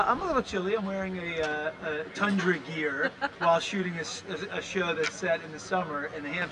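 Channel delay (comb filtering) runs from 0.42 to 6.42 s. One channel arrives roughly 10 ms late, and when both are summed to mono, shared content cancels at evenly spaced frequencies starting near 50 Hz, leaving the sound hollow and phasey throughout.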